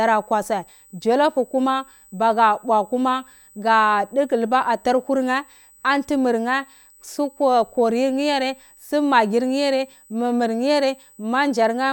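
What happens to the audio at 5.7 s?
At 5.7 s a USB whine sits under the speech. It is not a momentary event. The same tone runs through the whole clip. It is a thin, steady whistle fixed at 8 kHz, roughly 30 dB below the speech. The pitch gives away the source. A USB bus does its work in 125-microsecond microframes, and each burst of current draw leaks into the audio through shared power or ground. That repeats 8,000 times a second.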